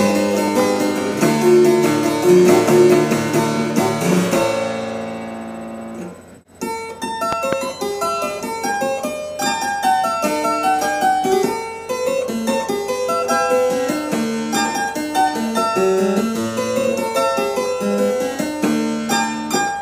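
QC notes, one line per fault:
0.48–0.62 s and 7.33–7.55 s, loud pop: a sudden voltage step, likely from a plug, switch, static or driver glitch, enters the signal path, giving a sharp double pop each time, about 10 dB then about 15 dB above the sound, which continues underneath.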